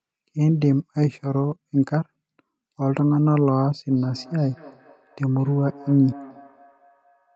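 Right at 0.5 s there's a call bitrate drop. The bandwidth estimate dips and the encoder falls from 40 kbps to 16 kbps, bottoming out for about a second before recovering by 1.63 s. Opus has far fewer bits to spend then, so the speech turns coarse and watery, with less top end than the rest of the call. That matters because the rest of the call already stops at 8 kHz.

From 3.91 s to the end you get feedback echo between two devices. Two devices in the same room are on the call, and one is playing out what the other's mic sent, so that mic picks it up again. The echo canceller can't touch sound it didn't play itself. Each phrase comes back roughly a fifth of a second later, thin and ringy, at about 22 dB below the speech.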